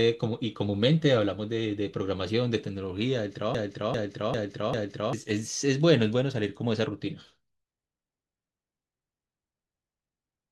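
Broken-record loop in this speech clip, 3.55 to 5.13 s: a 0.40 s fragment repeats four times back to back, likely a stalled player or stream, losing the underlying audio.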